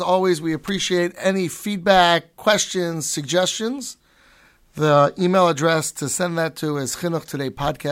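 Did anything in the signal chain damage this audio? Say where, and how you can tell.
Yes: a sharp snap at 0.68 s, between "always we" and "any feedback questions suggestions", peaking around -15 dBFS, is likely an electrical switching spike coupled into the analogue wiring.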